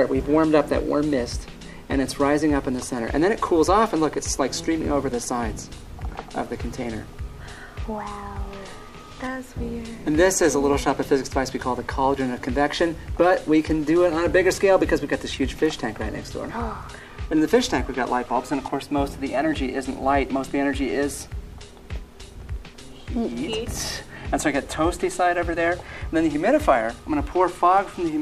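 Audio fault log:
15.33–15.37 s and 18.26–18.28 s, corrupt frame decoded: bit errors damaged compressed frames, and the decoder played them anyway, misreading gains or codes and putting energy at the wrong frequencies. The first event spans about three frames (roughly 40 ms), with its error peaking around -15 dBFS. The second spans about two frames (roughly 20 ms) and is weaker, around -30 dBFS. Each is heard as a short chirp, squeak, blip or noise burst lasting only as long as the damaged frames.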